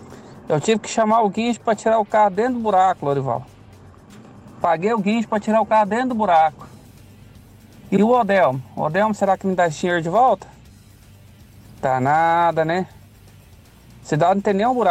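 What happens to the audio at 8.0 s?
At about 7.96 to 8.01 s there's a short stutter from repeated frames: a roughly 52 ms chunk, about what two compressed frames would hold, gets sent through the decoder a second time, so that slice of sound plays twice and the clip runs about 52 ms longer.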